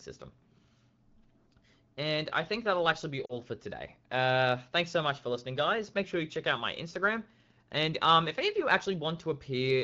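At 3.26 to 3.33 s, lost AMR speech frames cause a brief warbling dip. The decoder bridges a gap of about 40 ms, consistent with two dropped 20 ms frames, by reusing its last good settings at falling gain. A spectrogram shows smeared harmonics fading out, and the waveform a shrinking envelope.

From 6.62 s to the end, Wi-Fi interference adds a faint tick every 102.4 ms as the audio circuit rectifies a nearby radio's beacon, roughly 40 dB below the speech. On a spectrogram it appears as thin, evenly spaced vertical lines, and on the waveform as tiny regular spikes.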